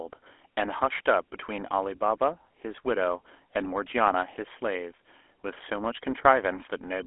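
From start to finish the speech carries GSM full-rate codec damage: buzzy, gravelly roughness from a pulse-driven vocal-tract model, fitting 13 kbps. A spectrogram shows the band held near 300 Hz to 3.4 kHz, empty above 3.8 kHz, with coarse, smeared harmonics.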